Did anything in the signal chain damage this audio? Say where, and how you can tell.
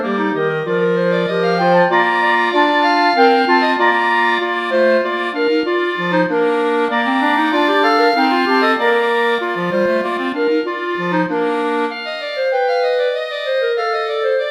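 Yes, at the converter. From 7.2 to 10.2 s a fine hiss and roughness ride on the sound, strongest on loud, bright passages and gone in quiet gaps. That is sample clock jitter: timing wobble of a couple of microseconds, leaving error roughly 35 dB below the signal.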